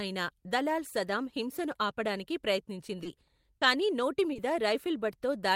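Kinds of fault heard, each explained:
Short concealed packet loss: brief smears or wobbles near 3.03, 3.57 and 4.33 s, where 20 to 40 ms of late speech was patched by extrapolating the preceding sound.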